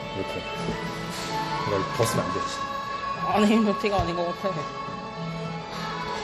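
Repeated lossy re-encoding has most likely degraded these sounds, through several passes, probably about four, of an MP3 chain whose character points to around 64 kbit/s. That is generation loss: each decode and re-encode quantises the audio again on a shifted frame grid, so noise and spectral gaps pile up. Throughout the clip the sound is swirly, smeared and hollow, transients lose their edge, and nothing reaches above 18.9 kHz.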